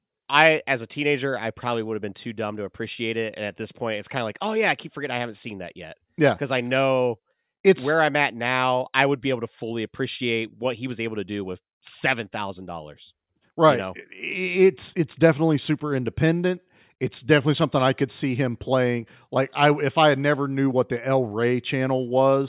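No audible technical faults are present anywhere in this speech recording.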